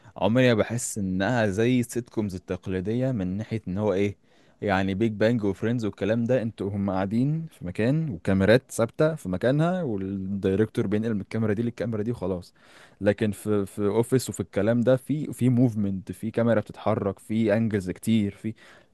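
No technical faults can be heard anywhere in the recording.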